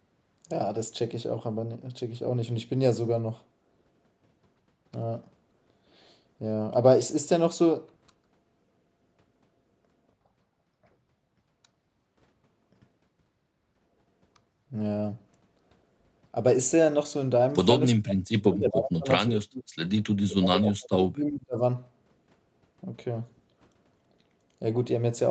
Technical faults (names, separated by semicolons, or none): speech suppressed in double talk